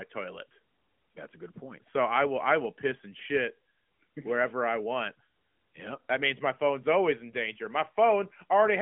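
Speech over an AMR narrowband mobile codec link, band-limited to roughly 150 Hz to 3.4 kHz with nothing above 3.7 kHz and only light coding texture consistent with the 12.2 kbps mode, and no faults found.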